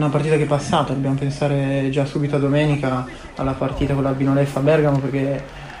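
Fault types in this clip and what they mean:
Imaging from linear upsampling: from 3.60 s, crude straight-line interpolation dulls the top and leaves very faint mirrored images between 12 and 24 kHz, which fits a 24 kHz source raised to 44.1 kHz.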